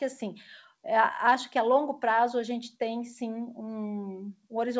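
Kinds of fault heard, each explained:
The speech comes through a normally working WebRTC call path with nothing above 8 kHz, consistent with a wideband codec such as G.722 at 64 kbps, and the signal shows no dropouts, glitches or other faults.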